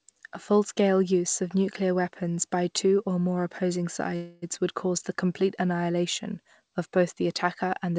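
At 4.16 s the speech stalls for about 0.26 s, until 4.44 s, in what sounds like a call audio freeze. The likely cause is packets held up in transit, leaving the jitter buffer empty, so the receiver stretches the last sound into a fading buzz rather than dropping to silence. When delivery resumes, the speech picks up where it stopped with nothing lost, now running about 0.26 s later. The call path band-limits everything to 8 kHz, which fits a G.722 codec.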